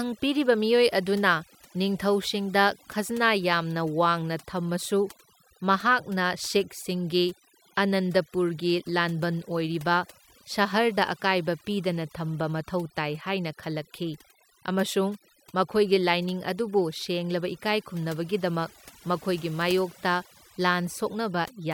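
Throughout, overdone noise removal cuts frequency bands near the estimated noise floor, leaving near-silent gaps with twinkling specks and taking quiet parts of the speech with them.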